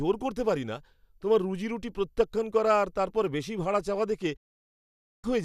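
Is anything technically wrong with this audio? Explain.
Yes. From 4.36 to 5.24 s there is a digital broadcast dropout: the receiver stopped getting valid frames and muted, so the speech fades out within 8 ms and 0.86 s of it is lost.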